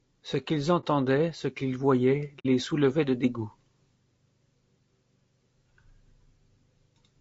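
Throughout the speech there is a rough, grainy texture, with noise filling the gaps between pitch harmonics and a thin, synthetic-sounding top band. This is likely low-delay AAC compression at a bitrate around 32 kbps. Its very short frames smear harmonics, which sets it apart from the swirly artefacts of ordinary AAC.

At 0.80 to 0.85 s, just before "ce qu'ils voyaient", and again at 2.39 to 2.46 s, between "ce qu'ils voyaient" and "soulevait de dégoût", the sound fades into a brief silence and back out. These holes last about 30 ms and 60 ms. This is AAC frame loss with muting: the missing audio is replaced by silence, and the overlapping windows soften both edges.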